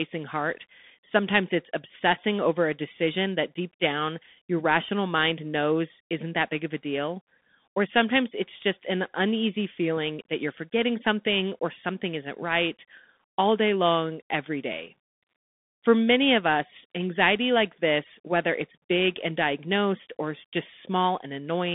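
From start to finish the speech carries the sound of a Bluetooth CVSD headset codec. Everything sits between roughly 150 Hz and 3.6 kHz, and the one-bit slope coding, which fits a 64 kbps link, leaves plainly audible damage: scratchy s sounds, strained loud highs, and grainy hiss underneath.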